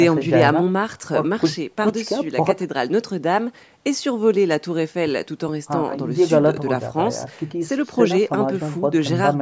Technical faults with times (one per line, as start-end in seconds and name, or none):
none